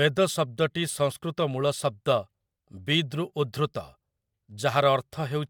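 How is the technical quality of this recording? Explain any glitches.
Nothing in this speech recording jumps out as a glitch, so there's really no technical problem to explain here.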